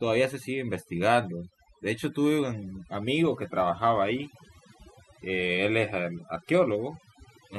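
Speech, with overdone noise removal running for the whole clip. The noise reducer is set too aggressively, so any frequency band sitting near its noise estimate is pulled far down or gated off entirely, and the quieter components of the voice are removed along with the noise. The background drops and breaks up into twinkling specks where isolated bands flicker on and off.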